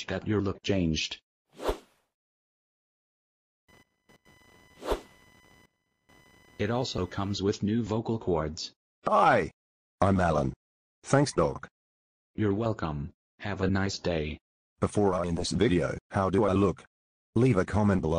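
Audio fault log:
3.68–7.37 s: computer activity noise. A faint buzzing chirp, about 35 dB below the sound, pulsing at roughly a kilohertz, appears and then stops independently of the audio. Changing load on the host computer is shifting the audio circuit's shared ground, injecting that switching activity into the signal.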